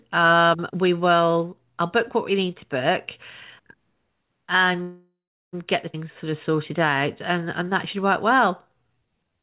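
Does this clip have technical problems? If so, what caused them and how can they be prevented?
Yes. Packets were most likely held up in transit, draining the jitter buffer, so this is a call audio freeze. From 4.82 to 5.55 s the sound stops moving forward: the last fragment is stretched into a fading buzz for roughly a third of a second, then about 0.36 s of silence follows before the audio resumes exactly where it left off. Nothing is lost, but about 0.71 s of delay is inserted. A larger jitter buffer target or a more stable network path would prevent it.

At 5.93 to 5.96 s there is a skip ahead. Roughly 0.3 s of audio was dropped, either in transit or by the overflowing buffer, while later audio was already waiting. Playback jumps forward with only a tiny join of about 9 ms, so a short stretch of speech is simply missing and the two sides meet almost directly. A buffer that drains backlog gradually through time-stretching, rather than dropping whole chunks, would avoid this.

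From 6.04 s to the end at 9.43 s, a jitter buffer slow-down follows. The buffer repeated single pitch periods and slivers of pauses to build up a reserve, adding 264 ms in total. The speech plays at about 92% speed at unchanged pitch, sounding drawn out. Keeping the buffer's target delay steady, instead of cutting it sharply and then rebuilding, would prevent this. Throughout, the G.711 mu-law call path leaves nothing above 4 kHz.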